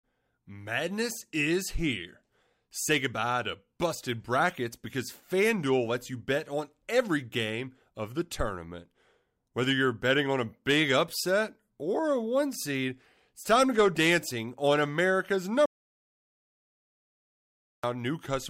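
At 15.66 s the speech cuts off mid-flow. It returns at 17.84 s. Between those points there is an audio dropout to silence lasting about 2.18 s. The gap is silent, with no room tone or hiss beneath it. The input was likely lost for that stretch, through a disconnected device, a failed link or a stray mute, while recording carried on. Whatever was said during those two seconds is gone.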